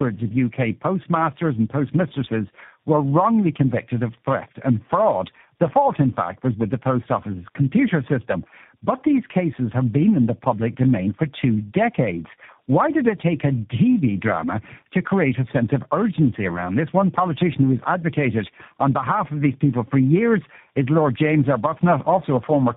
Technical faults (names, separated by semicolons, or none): tandem speech coding